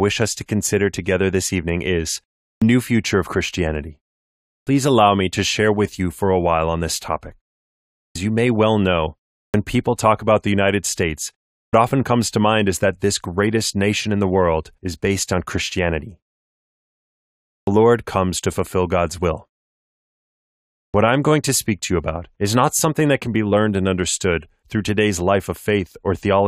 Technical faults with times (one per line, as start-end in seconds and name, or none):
2.55-2.62 clipped start after a pause
4.60-4.67 clipped start after a pause
8.09-8.15 clipped start after a pause
9.48-9.54 clipped start after a pause
11.66-11.73 clipped start after a pause
17.61-17.67 clipped start after a pause
20.88-20.94 clipped start after a pause